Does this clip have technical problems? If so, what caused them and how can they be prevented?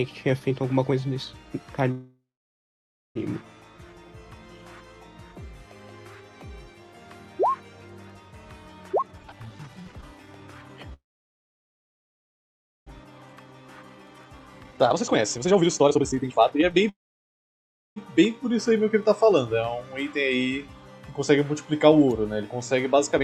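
Yes. A call audio freeze, most likely from delayed packets draining the jitter buffer, occurs at 1.91–3.17 s, 10.94–12.89 s and 16.89–17.98 s. The last sound is stretched into a fading tail, then silence of about 0.9 s, 1.9 s and 1 s, and the audio resumes where it stopped with nothing lost. Preventing this means steadier network paths and a jitter buffer deep enough for such delay spikes.

A jitter buffer speed-up follows when the buffer holds excess audio and the receiver cuts short pitch-period slices to shrink the delay. From 8.89 to 10.92 s the sound runs at 159% with roughly a second removed, and from 13.04 to 16.84 s at 148% with roughly two seconds removed. A brief burst at 195% comes at 23.16 s. The pitch stays the same throughout, but each passage sounds hurried. Draining the excess more gradually, or avoiding the bunched packet arrivals that cause it, would prevent this.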